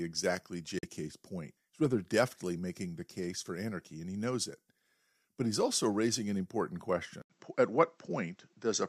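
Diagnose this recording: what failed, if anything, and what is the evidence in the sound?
Bluetooth dropout at 0.79 to 0.85 s: the speech cuts to silence, then resumes as if it had kept playing, likely packets lost on the wireless link.

Input switched to a poorer device at 7.22 s: an 80 ms silence, then duller speech with nothing above 7.9 kHz and new background noise, likely a capture-stage change to another microphone.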